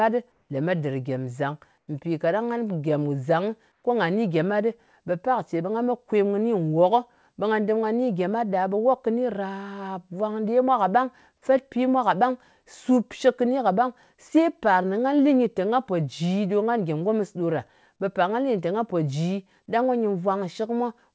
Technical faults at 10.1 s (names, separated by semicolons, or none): none